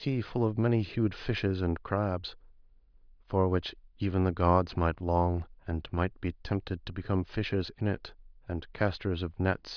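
Nothing stood out on listening to this speech recording.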